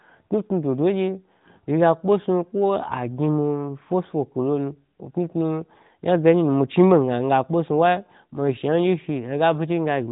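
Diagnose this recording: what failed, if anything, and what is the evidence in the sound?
Nothing has failed in this recording; no stage of the chain shows a fault. The speech has passed through an AMR narrowband mobile codec, audible as a band limit with nothing above about 3.8 kHz and only light coding texture, which fits the codec's highest-rate mode at around 12.2 kbps.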